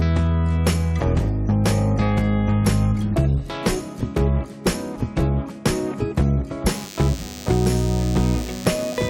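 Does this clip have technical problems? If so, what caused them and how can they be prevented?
Yes. DECT cordless phone buzz comes in at 6.66 s and runs to the end. It's a thin 100 Hz buzz, with the phone's 10 ms radio bursts being rectified in the audio circuitry. It sits well under the sound, around 20 dB down. Keep DECT handsets and base stations well away from the recording chain.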